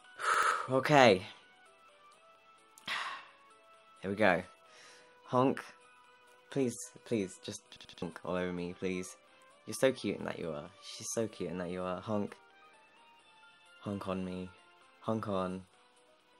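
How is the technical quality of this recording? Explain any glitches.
Two stutters mar the recording. From 0.34 to 0.51 s, and again from 7.77 to 8.02 s, an 85 ms piece repeats with hard joins, two and then three extra times. This is a repeated buffer: new audio arrived late, so the device replayed its last buffer, which fits a 4096-sample buffer. Roughly 150 ms and 300 ms of sound are lost.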